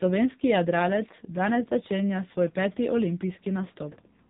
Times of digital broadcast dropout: none

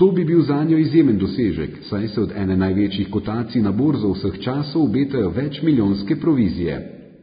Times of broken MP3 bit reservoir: none

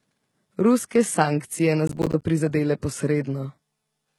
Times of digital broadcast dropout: none

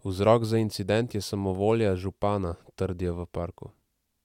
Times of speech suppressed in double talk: none

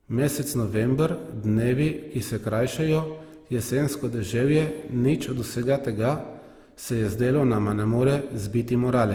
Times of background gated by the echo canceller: none

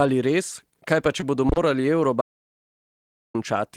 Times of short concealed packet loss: 1.20-1.23

